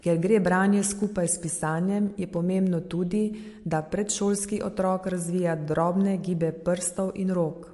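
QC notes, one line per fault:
Throughout, MP3 compression: the speech has a plainly audible watery, swirling quality, and there is nothing at all above 11.3 kHz. This is likely MP3 encoding with too few bits to go around, which fits a bitrate near 52 kbps. The encoder drops weaker frequency lines that flicker in and out from frame to frame, and it removes the top of the spectrum at a fixed cut-off.
1.04 s, dropped samples: a single sharp click, which would show as a thin vertical line across the spectrum. This is likely a tiny fraction of a millisecond of audio missing from the stream, so the waveform jumps straight from one value to a later one instead of moving smoothly between them. The gap is far too short to take away any sound, so the abrupt jump itself is all that is heard.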